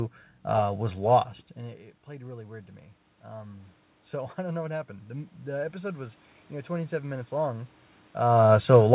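Automatic gain rising, 3.33 to 7.8 s: the input fell about 17 dB, so gain control crept up about 6 dB, swelling voice and room noise alike.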